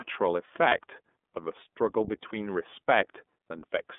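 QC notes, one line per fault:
Throughout: iLBC codec. The whole clip has that narrowband phone-line sound. The band sits at about 200 Hz to 3.5 kHz, so the top end and the lowest bass are simply gone. The damage is plainly audible: speech stays clear but has a rough, slightly synthetic edge, because each frame's excitation is coded on its own with no help from the frame before. The character fits iLBC's 30 ms frame mode at 13.33 kbps.
0.68–0.75 s: lost iLBC frames. There's a short, slightly buzzy hold in the speech here, roughly 30 ms long, which points to a single dropped frame. The decoder papered over the gap by repeating the last pitch cycle with some noise mixed in, so you hear a brief frozen, breathy vowel-like smear instead of silence. Because iLBC frames stand alone, the speech snaps straight back to normal right after.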